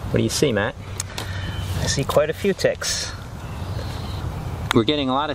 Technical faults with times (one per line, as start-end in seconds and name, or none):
1.47-1.49 lost LE Audio frames
4.42 lost LE Audio frames